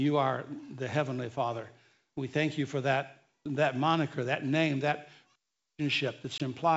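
At 6.38 to 6.42 s, near the end of the speech, there is packet loss on an ADPCM call. About 20 ms of audio drops out, likely a couple of packets, and is replaced by silence. The gap has hard edges. The decoder's predictor and step size no longer match the sender's, so the speech comes back with brief, slight distortion. The G.722 wideband coding, which sounds like 64 kbit/s, carries the speech up to 7 kHz with at most a faint hiss.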